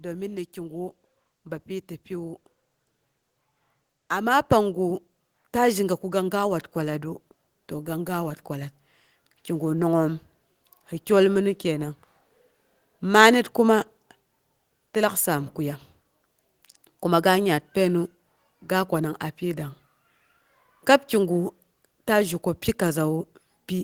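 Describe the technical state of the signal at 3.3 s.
The signal is intact at 3.3 s, with no dropout, clipping, distortion or other audible fault at that point in the speech.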